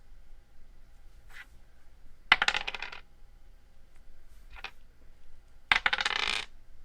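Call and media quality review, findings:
No audible faults found.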